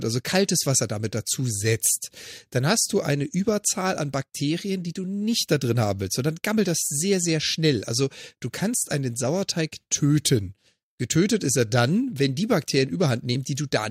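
From start to finish, a gritty, inharmonic fizz rides on the speech, growing on louder and brighter syllables, at roughly 25 dB below the voice. This is crude rate conversion: the audio was resampled by a modest ratio, which fits a 44.1 kHz to 48 kHz change, using plain linear interpolation with no anti-aliasing filter. The interpolation error repeats in a pattern set by that ratio, producing shifted, inharmonic copies of the voice.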